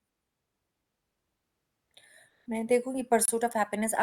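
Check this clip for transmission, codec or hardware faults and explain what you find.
One fault is present in this speech: a gap between stream segments from 3.25 to 3.28 s. Two segments' timestamps leave a 27 ms hole, which fits a 1-second segment boundary, and the player fills it with hard-edged silence. Unlike a dropout, nothing is lost: the speech resumes exactly where it stopped, just delayed.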